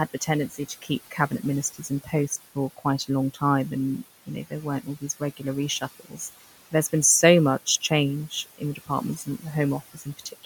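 Noise suppressor artifacts run the whole way through. The room noise, sitting about 15 dB under the speech, gets pulled down by about 15 dB between phrases and swells back underneath them. Speech cut by the noise suppressor turns up at 0.14–1.32 s, 1.73–3.42 s, 4.26–5.42 s, 5.81–6.2 s, 8.3–9.44 s and 9.94–10.45 s. Each time the suppressor mistakes soft bits of speech for noise and ducks them by about 12–15 dB. Only about 150 to 400 milliseconds of each stretch are hit, and those quiet endings and consonants sound swallowed.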